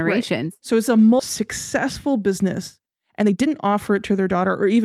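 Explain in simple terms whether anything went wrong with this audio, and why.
At 1.19 to 1.21 s the speech suddenly jumps forward. This is a skip ahead: about a second of audio was dropped and the two sides joined directly.

From 1.86 s to 4.84 s the speech runs about 17% faster at normal pitch, sounding hurried. This is a jitter buffer speed-up trimming tiny pieces, about half a second in total, to catch up.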